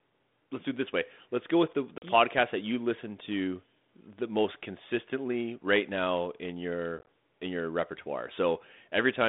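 A speech clip over a narrowband ADPCM line shows packet loss on an ADPCM call: a hard 40 ms hole at 1.98 s, and 50 ms of gaps scattered across 6.99–7.07 s, after which the decoder's predictor briefly mistracks.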